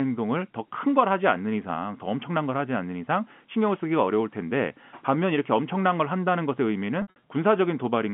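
Right near the end, from about 7.02 to 7.21 s, there's packet loss with pitch repetition. Around 140 ms of audio goes missing, scattered across a 200 ms stretch rather than in one block, which fits roughly seven 20 ms packets. The receiver fills each hole by looping the last pitch period, so you hear a brief held, buzzy smear. The longest single gap, about 60 ms, starts to fade before the speech cross-fades back in. All of this sits inside the narrow 150 Hz to 3.4 kHz telephone band of the G.711 line.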